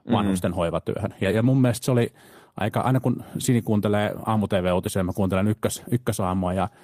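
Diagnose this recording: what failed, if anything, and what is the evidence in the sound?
Packet loss on the network path, recovered by the codec as a lost packet rebuilt from error correction. There are two rough stretches: 1.11 to 1.57 s, and 4.27 to 4.37 s. Neither has a gap or dropout. Instead the speech turns grainy and noisier for about 240 ms of rebuilt audio, then about 60 ms. That pattern fits a run of roughly a dozen lost packets, then three. Each lost packet was replaced by a low-bitrate copy carried in the next one.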